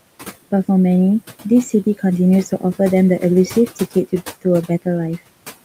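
A speech recording where noise suppressor artifacts run throughout: the suppressor pulls the background down by about 17 dB between phrases, so the noise dips and returns under speech. The room noise sits about 19 dB below the speech.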